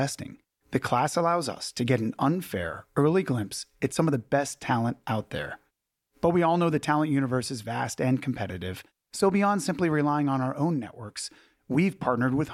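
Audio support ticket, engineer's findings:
No technical faults found in the signal path on this speech recording, so there is no symptom, component or mechanism to note.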